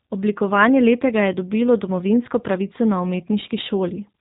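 Speech runs through G.729 coding throughout, its sound pointing to a rate near 8 kbit/s: plainly rough and synthetic, with a spectrogram showing a hard ceiling at 4 kHz.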